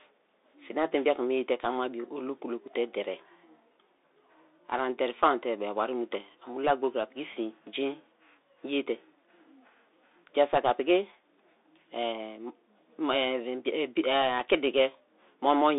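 From start to finish the speech carries the sound of a Bluetooth CVSD headset codec, and the damage is plainly audible. Nothing reaches above 3.8 kHz, and the usable band sits at roughly 300 Hz to 3.7 kHz, which fits a 64 kbps one-bit-per-sample link. Because each sample only nudges the level up or down by an adapting step, loud high-frequency content outruns it and distorts, sibilants turn scratchy, and a grainy hiss sits beneath the speech.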